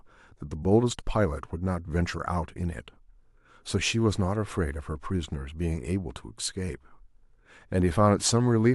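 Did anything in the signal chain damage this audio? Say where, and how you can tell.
No, no damage is audible.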